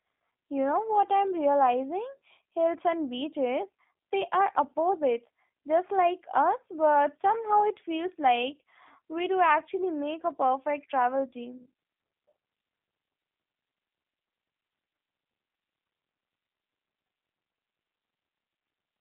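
Speech passed through a G.729 codec at about 8 kbit/s, rebuilt from a vocal tract filter and sparse pulses, leaving it rough and synthetic, confined to 250 Hz–3.6 kHz, nothing above 3.8 kHz.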